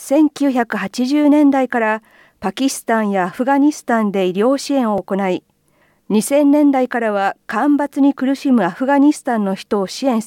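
At about 4.98 s there's a tiny repeated buffer. New audio didn't reach the device in time, so it replayed the last chunk it had, twice more, back to back. The repeated piece is only around 1.45 ms long, which fits a 64-sample buffer, so you don't hear a stutter. Instead it comes across as a brief click or buzzy tick from the hard joins. Essentially nothing seems to go missing, just that small burst of repetition.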